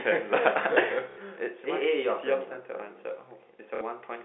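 At 1.11 s the speech breaks into a short robotic stutter lasting 60 ms, to 1.17 s. This is packet loss with the last packet repeated. Audio went missing, and the receiver replayed its last good chunk until fresh data arrived. The repeats seldom line up with the pitch, so the run buzzes. The same 60 ms stutter returns from 3.75 to 3.81 s. Both sit within the narrow telephone band, about 250 Hz to 3.6 kHz.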